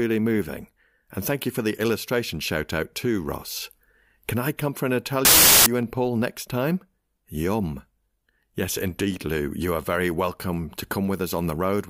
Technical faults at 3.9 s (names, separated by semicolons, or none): none